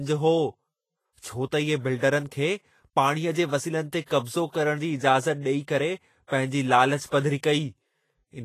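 The speech was likely encoded with Vorbis compression at a low quality setting, consistent with a bitrate near 29 kbps. Throughout, nothing is present above 14.2 kHz, and coarsely quantised treble turns fine detail into hiss, leaving a grainy, roughened tone with softened attacks.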